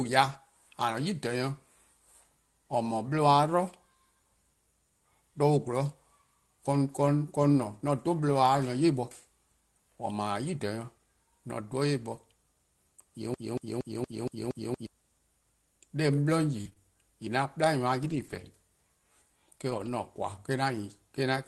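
From 13.34 to 14.87 s, the stream likely stalled and kept replaying the last fragment it held, producing a broken-record loop. A 0.23 s slice of the speech repeats exactly seven times back to back, stuttering mechanically while the speech due in that span is lost.

Between 16.61 and 19.88 s, a few packets went missing or arrived late and the receiver filled each hole by extending the preceding sound. These scattered short gaps, the longest around 40 ms, come through as brief ticks, smears and hiccups in otherwise clear speech.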